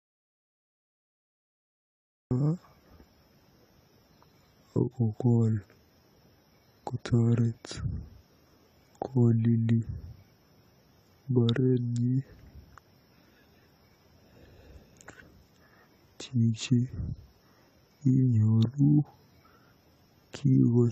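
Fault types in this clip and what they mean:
AAC compression: The speech sounds dull and smeared throughout, with a plainly audible warbling, fizzy texture and nothing above 14 kHz. The cause is likely lossy AAC-LC coding at a low bitrate, around 32 kbps, quantising the spectrum coarsely and cutting off the top band.
audio dropout to silence: The clip opens in complete silence with no room tone, already under way at the start, until about 2.31 s, when the speech cuts in mid-flow. The input was likely lost or muted while the recorder kept writing silence, so that opening stretch is gone.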